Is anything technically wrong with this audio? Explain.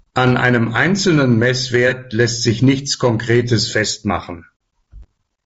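Yes, three faults can be heard.

Hard clipping runs through the whole clip. The level is pushed about 2 dB past what the signal path can pass, so the loudest peaks, under one percent of samples, are cut flat. The flat tops add high harmonics heard as brief crackle on peaks. This sets it apart from codec damage, which is present at every level.

Low-delay AAC compression is the likely cause of a rough, grainy quality heard throughout. It points to AAC-ELD at a low bitrate, around 32 kbps. The very short frames resolve pitch harmonics poorly, so noise fills the gaps between them and the top band sounds thin and synthetic. Unlike clipping, this grain persists in quiet passages too.

AAC frame loss with concealment occurs from 1.88 to 1.93 s, between "einem einzelnen" and "lässt sich nichts". About 30 ms of coded audio, roughly one frame, went missing, and the decoder filled the gap from the previous spectrum. 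The result is a brief smeared, noisy patch rather than silence, which distinguishes it from a plain dropout.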